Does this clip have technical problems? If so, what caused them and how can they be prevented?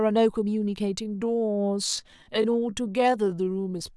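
Yes. A time-stretched section runs from 1.0 s to the end of the clip, where the speech abruptly slows to about 0.71 times its normal pace while its pitch stays unchanged. The slowed part drags, the likely result of software lengthening the audio to fit a target duration by repeating short slices instead of resampling it. Preventing this means editing content to length rather than stretching it, or reserving a gentler, higher-quality stretch for small adjustments only.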